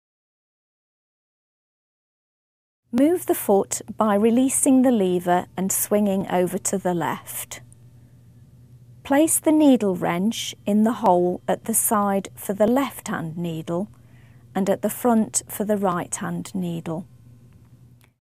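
From 1.36 s to 17.54 s there's a regular tick every 1.62 s, about ten in all. It's likely clock drift buffer slips: two clocks several hundred ppm apart, so the buffer periodically drops or repeats a few dozen samples, heard as a click.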